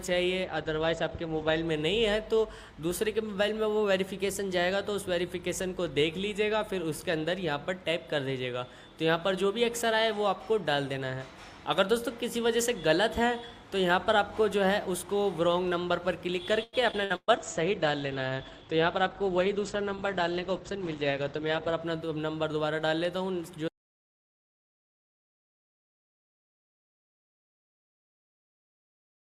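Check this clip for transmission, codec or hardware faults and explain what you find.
Five kinds of fault are present: two bitrate drops, a burst of packet loss, a jitter-buffer slow-down and speed-up, and a dropout to silence that runs to the end.

Call bitrate drop, 0.48 to 1.69 s and 17.38 to 21.87 s. The bandwidth estimate collapsed and the encoder fell from 128 to 14 kbps, then to 13 kbps, cutting the top end from 20 kHz to 8 kHz. The sound turns muffled and coarse, with the second drop holding its lowest rate for 4.4 seconds.

Repeated packet loss (robotic sound), 16.63 to 17.31 s. Four gaps opened in quick succession, the longest 117 ms, and the receiver filled each by extending the previous sound. Concealment covers about 42% of that span, so the audio sounds choppy, with pieces missing.

Jitter buffer slow-down, 17.32 to 17.54 s. With its reserve running low, the receiver repeated short pitch periods to add 41 ms, playing at 84% speed. 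Pitch stays the same, but the sound drags and stretches briefly, right after the loss burst.

Jitter buffer speed-up, 18.71 to 19.46 s. Excess buffered audio had built up, so the receiver trimmed small pitch-period pieces, removing roughly 70 ms and running at 108% speed. The audio sounds hurried at unchanged pitch, inside the low-bitrate stretch.

Audio dropout to silence, 23.68 s to the end. The input feeding the recorder was lost, likely through a disconnected device, failed link or stray mute, and silence was written from then on. The sound stops abruptly into silence with no room tone.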